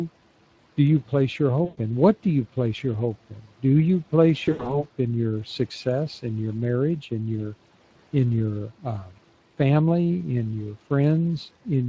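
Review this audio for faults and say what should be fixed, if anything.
The Speex codec is running at roughly 20 kbps, with too few bits to code the excitation faithfully. Across the whole clip the speech sounds plainly hoarse and noisy. Raising the Speex quality setting, or moving to a modern codec such as Opus, would prevent this.

VoIP packet loss concealed by the speech codec occurs twice. At 1.65 to 1.79 s, after "do you place your", about 120 ms of packets go missing. The decoder fills the gap by extending the last pitch and filter shape at falling gain, so the speech smears out and fades. At 4.45 to 4.88 s, after "you place" and before "in your success in", 140 ms of loss is scattered over about 200 ms, with the longest run 80 ms. This produces repeated weakened stretches, and because each concealed frame builds on the previous one, the speech stays thin until it recovers. A larger jitter buffer, forward error correction or a more stable network path would prevent these dropouts.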